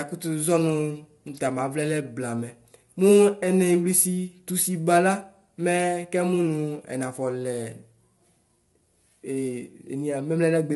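From start to finish the speech carries plainly audible low-delay AAC compression, most likely AAC-ELD at a bitrate that points to around 32 kbps. Its short frames can't separate the pitch harmonics cleanly, so the voice sounds rough and grainy, with noise filling the gaps between harmonics. On a spectrogram the harmonic stripes look smeared and speckled, and all energy stops at a hard ceiling near 11.6 kHz, leaving blank space above.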